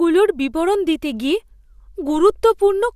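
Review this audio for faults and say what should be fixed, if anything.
Nothing here needs fixing, since no technical faults turn up anywhere in the recording.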